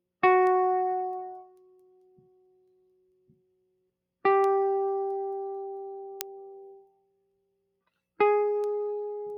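A noise suppressor built for speech stayed active across this music, treating sustained tones and ambience as noise and swinging its gain by about 20 dB. Attacks pass while held material and tails sink, so the music pumps and thins throughout.

From 1.21 to 3.91 s, and again from 6.79 to 7.89 s, the noise suppressor cut the sound harder, dropping it by up to about 21 dB. Sustained passages fall away and decays end abruptly, while sharp onsets still come through.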